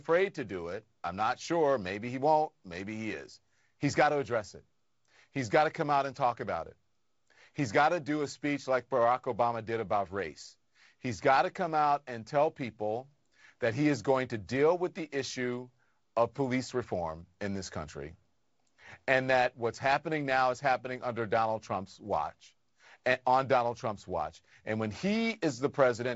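Speech carried over G.722 wideband telephone coding, which at 48 kbit/s leaves the lower band a little noisier and cuts off everything above 7.7 kHz; no faults are present.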